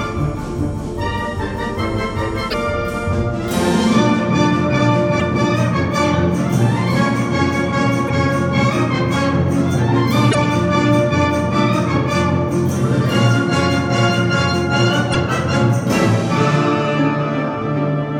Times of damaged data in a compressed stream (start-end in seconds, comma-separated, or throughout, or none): 2.47-2.54, 5.16-5.22, 8.08-8.10, 10.28-10.35, 15.13-15.16